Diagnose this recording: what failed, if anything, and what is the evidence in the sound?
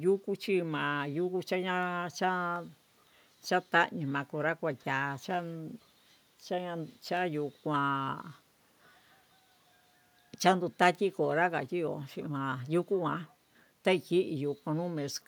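Single sharp clicks at 2.56 s and 7.17 s are dropped samples, likely a driver or buffer slip. The waveform jumps a fraction of a millisecond ahead, leaving no audible gap, unlike a dropout.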